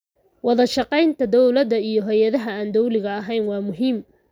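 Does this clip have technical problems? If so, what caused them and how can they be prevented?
No, no technical problems can be heard here.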